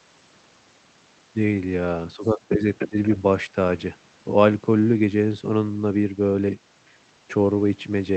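Speech suppressed in double talk, 2.16 to 2.62 s: the speech sinks by about 10 dB in patches totalling roughly 300 ms, sounding dipped and duller. The likely cause is an echo canceller that, facing two talkers at once, could not tell the near voice from loudspeaker echo and turned both down. Inside this stretch, at 2.23 to 2.27 s and 2.49 to 2.54 s, the other side's voice leaks through as brief, faint scraps, about 35 dB and about 20 dB below the speech. These are likely far-end sound that the canceller failed to remove from the microphone.

Other side's voice leaking through, 2.76 to 3.16 s: a second voice is clearly audible for about 0.4 s, only about 5 dB under the speech. The likely cause is loudspeaker output reaching the microphone with the canceller removing little of it.

Speech suppressed in double talk, 2.89 to 2.97 s: during that leak, the speech briefly drops by about 20 dB, a short cut-out lasting roughly 70 ms. 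This is likely the canceller clamping down hard while both voices overlap.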